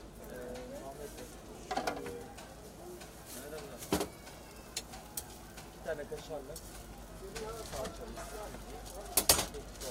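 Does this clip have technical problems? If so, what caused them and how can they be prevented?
No, this clip has no technical problems, so there is nothing to prevent.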